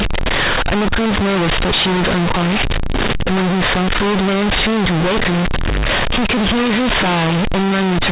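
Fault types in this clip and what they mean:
Companded audio read as linear: the speech was stored as G.711 mu-law, but its bytes play as 8-bit samples with no expansion. Each sign change swings the output across half its range. Quiet passages match loud ones. Throughout, it sounds harsh, buzzy and noisy in pauses.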